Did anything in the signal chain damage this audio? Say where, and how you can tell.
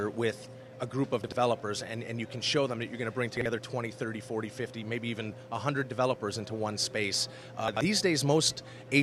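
Yes, chunks out of order at the driver or buffer stage: short jumbled blips at 1.24–1.32, 3.37–3.46 and 7.68–7.81 s, where 43 ms blocks land one or two slots late.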